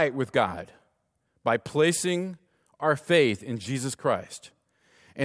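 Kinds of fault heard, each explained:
No kinds of fault are heard in this speech.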